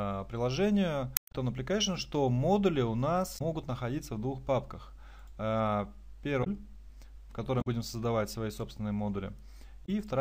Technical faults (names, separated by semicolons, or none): damaged data in a compressed stream